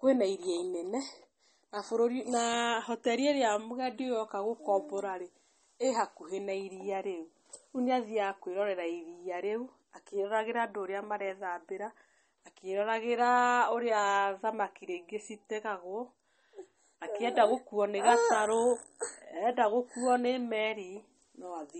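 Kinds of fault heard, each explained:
MP3 compression: Nothing remains above 8.4 kHz, and coding damage is plainly audible throughout. This is likely low-bitrate MP3 encoding, fitting roughly 32 kbps. Short of bits, the encoder cuts the treble at a fixed frequency and discards weak detail.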